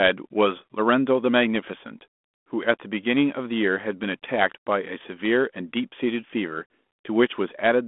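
No technical faults are audible.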